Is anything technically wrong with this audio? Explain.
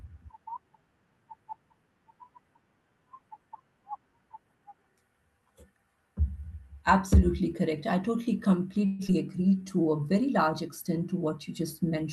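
Yes. There are three faults, all close together near the end.

From 8.85 to 9.01 s, just after "correct I totally", there is a call audio freeze. The last sound carries on as a fading buzz for about 0.14 s. Packets were likely delayed and the jitter buffer ran dry. Then playback resumes where it stopped, with nothing lost.

At 9.07 to 9.10 s comes a skip ahead. Playback jumps forward with almost no gap. Roughly 70 ms of audio is dropped, and the two sides are butted together. The buffer was likely shedding the delay the freeze had added.

From 9.51 to 10.02 s, just before "very large extent to", there is a jitter buffer slow-down. The buffer repeated single pitch periods or bits of pauses to rebuild its reserve. The audio plays at about 88% speed, stretched by 69 ms. The pitch stays the same, but sounds are drawn out.

The call codec's upper limit is near 12 kHz throughout. That fits an Opus link.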